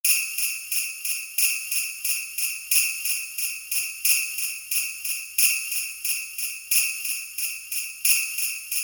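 Nothing goes wrong anywhere in the clip, so there's no fault to point to at any moment.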